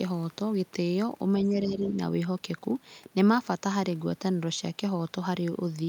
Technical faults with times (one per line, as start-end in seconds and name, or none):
1.43-1.91 other side's voice leaking through
1.47-1.95 speech suppressed in double talk